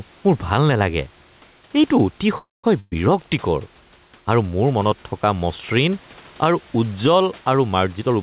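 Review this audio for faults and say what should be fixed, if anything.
Gain pumping runs through the whole clip: the background swells in the pauses and dips by roughly 5 dB whenever the speech gets loud, so quiet and loud passages sit unnaturally close together and the sound feels squashed. This is likely a microphone gain set far too high, with a fast limiter or compressor clamping down on each loud syllable and releasing between them. The steady room noise, about 34 dB below the speech, is what makes the breathing audible. Lower the input gain so the limiter rarely engages.

Call audio freeze from 2.38 to 2.66 s: the speech stalls into a fading buzz or hiss, then about 180 ms of silence, before carrying on exactly where it stopped. Packets were likely held up in transit and the jitter buffer ran dry, so the receiver stretched the last sound and then waited. About 254 ms of filler was inserted, nothing was lost, and the delay grew by that amount. 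Improve network stability or give the jitter buffer more headroom.

Burst of packet loss from 2.80 to 2.94 s: the last sound is held and fades for about 121 ms, with around 30 ms of it going silent. The speech then resumes further along, with roughly 120 ms never heard. Several consecutive packets were dropped or arrived too late, and concealment could only extend and fade what came before. Add forward error correction or packet redundancy to protect against short loss bursts.

Jitter buffer speed-up from 7.97 to 8.14 s: the speech rushes at about 162% of normal speed while keeping its pitch, sounding hurried. The buffer had built up more audio than its target, so it removed short pitch-period-length pieces in quick succession, about a tenth of a second in total, to bring the delay back down. Smoother packet delivery would avoid the buildup that forces this catch-up. Nothing above 4 kHz comes through, which fits the G.711 mu-law call codec.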